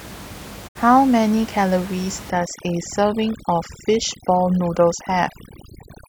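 A speech recording with two separate problems. At 0.67 s the sound fades out over about 20 ms and stays silent until 0.77 s, then returns with that stretch simply missing. This is a digital broadcast dropout: the receiver muted during about 64 ms of corrupt or missing data, which fits two lost frames. From 2.3 s to the end, the room noise that sat about 17 dB under the speech turns to near silence speckled with twinkling. That points to overdone noise removal, where bands close to the noise estimate were pulled far down, taking the quieter parts of the speech with them.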